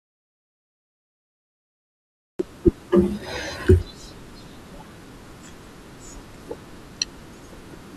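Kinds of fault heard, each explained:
Audio dropout to silence: the speech clip opens already in silence, with no room tone at all, until about 2.39 s when the sound suddenly cuts in mid-flow. That's likely an input that dropped out, a link or device, while the recorder kept writing silence.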